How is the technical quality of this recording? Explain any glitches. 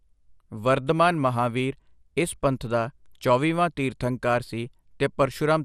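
The recording has one fault, and it runs the whole way through. The speech has plainly audible codec damage, most likely from MP2 compression at a low bitrate, which fits a rate of around 80 kbps. Nothing is present above 15.2 kHz. The encoder splits the sound into sub-bands and rations bits among them. Upper bands drop out and flicker, and the rest are coarsely quantised. The result sounds dull, with a gurgling, granular edge.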